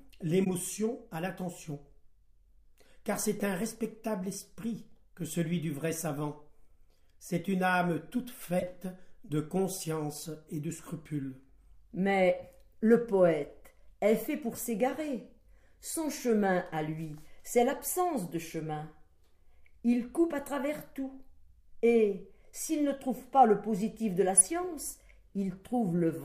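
Short bursts of corrupt frame decoding occur at 0.44–0.51, 3.58–3.63, 8.59–8.63, 14.52–14.58 and 24.37–24.43 s. In each, damaged compressed data was played as if valid. Misread gains and codes push energy into the wrong frequencies. Each sounds like a brief chirp or noisy blip lasting one to four frames. The loudest, at 24.4 s, peaks near −10 dBFS. The one at 14.5 s is faint, around −35 dBFS.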